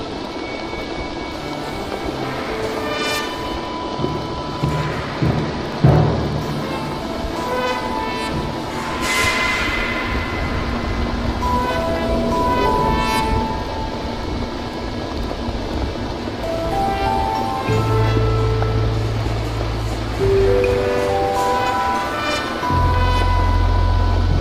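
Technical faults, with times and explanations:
6.97–24.40 s, sample clock jitter: the converter's clock wobbles by roughly 3 microseconds, so samples land slightly early or late. The error tracks the waveform's slope, adding a hiss about 35 dB down that roughens loud, bright passages and disappears in silence.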